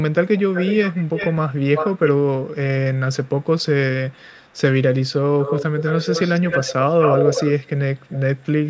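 A speech clip with a delayed double of the voice at 0.12–1.38, 1.74–2.11, 2.41–2.51, 3.24–3.48 and 4.1–4.58 s, trailing by 363 ms. From 5.4–7.69, 7.98–8.2 and 8.37–8.46 s it trails by 212 ms, loudest around 1.74 s and 5.4–7.69 s, quieter elsewhere and barely there in places. This is echo leak, likely from a speakerphone whose echo canceller let its own pickup back into the call.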